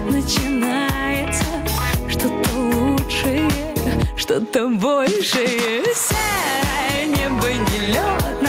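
Gain pumping runs through the whole clip. The input gain was likely set far too high for the microphone, leaving a fast compressor or limiter to haul the level down each time a loud sound arrives and let it back up once it passes. The gain swings by roughly 10 dB, so loud and quiet passages sit unnaturally close together and the sound feels squashed.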